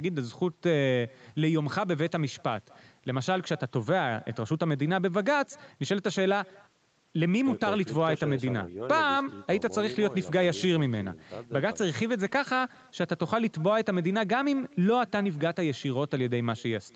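From the start and through the whole recording there is echo with no canceller: the far end's loudspeaker feeds the microphone, and each phrase returns around a fifth of a second later, about 28 dB down, as a faint, thin shadow. On a spectrogram, each syllable carries a weak, smeared duplicate just to its right.

From 7.11 to 13.15 s a call bitrate drop sets in, and the encoder's budget stays at its lowest for about 6.0 s. The speech turns rough and watery, which fits Opus falling from about 40 to about 18 kbps. The spectrogram shows blotchier, coarser harmonics, with the upper band below the 8 kHz ceiling thinning out until the quality recovers.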